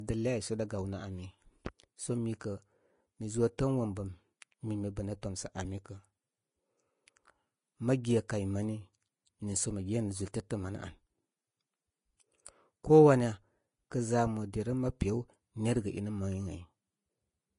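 From start to finish the speech carries plainly audible codec damage, likely from Vorbis compression at a low quality setting. Nothing reaches above 10.5 kHz, so the top octave is missing. Below that ceiling the treble is quantised so coarsely that fine detail is replaced by noise of similar energy, giving a hissy, grainy texture, roughened tones and softened consonant attacks, which fits a bitrate around 31 kbps.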